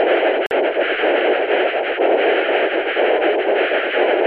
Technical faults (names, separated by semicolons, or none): gap between stream segments